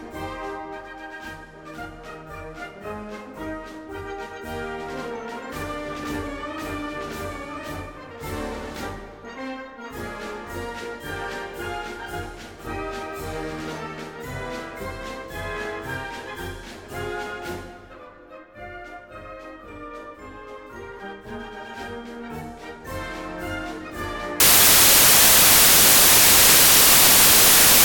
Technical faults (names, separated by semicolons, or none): samples built from the wrong bytes